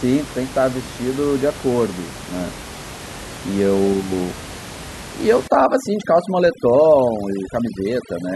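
From 5.48 s to the end, overdone noise removal sets in: a noise reduction stage is working far too aggressively, cutting individual frequency bands down or out whenever they sit close to its noise estimate. The room noise, about 15 dB below the speech, drops and breaks up into twinkling, warbling specks, and the quieter parts of the speech are removed along with it.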